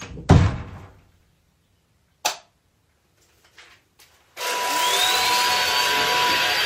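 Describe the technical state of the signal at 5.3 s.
An overlap between stream segments removes about 40 ms from 5.25 to 5.29 s. The player trims a doubled timestamp span, so the waveform jumps, heard as a tiny skip.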